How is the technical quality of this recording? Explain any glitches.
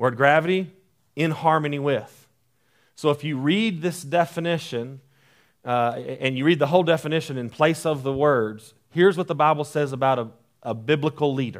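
No technical faults are audible.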